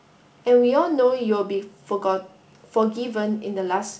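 No technical faults can be heard in this speech.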